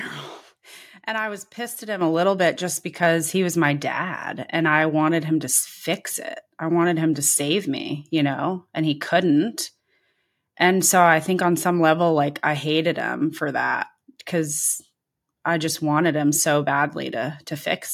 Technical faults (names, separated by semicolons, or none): microphone volume stepped up